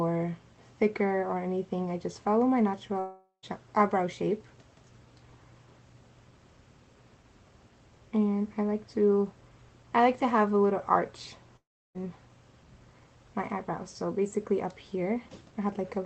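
Long network dropout at 2.99–3.45 s and 11.57–11.97 s: the sound smears into a fading buzz, then silence, and resumes with about 0.44 s and 0.38 s lost, likely from packets never arriving.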